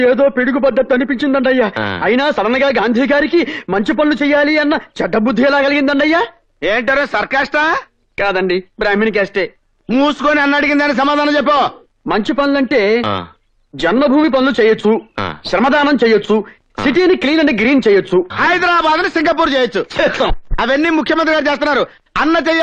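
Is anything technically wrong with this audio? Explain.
No, nothing technical stands out here; it all sounds steady and intact, with nothing jumping out as a problem.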